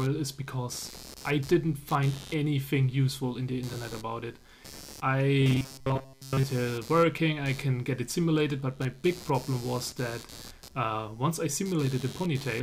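Right from the start and all the way through there's computer activity noise: a buzzy, scratchy layer pulsing at around 100 Hz, sitting roughly 20 dB under the sound. It rises and falls with the machine's load, not the audio, as processor or graphics activity disturbs the shared ground.

Then from 5.41 to 6.45 s it turns robotic: a rigid, metallic buzz at 134 Hz comes in, and the sound only loosely follows its original shape. That's likely robotic sound from repeated short buffers. Audio arrives too late, so the last chunk of around 7.5 ms gets looped, and most of the real material in that stretch is skipped.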